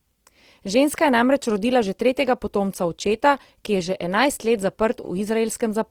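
A speech clip with Opus compression throughout: grainy, rough texture rather than MP3-style swirling holes, likely from music-mode encoding at a low bitrate, around 24 kbps.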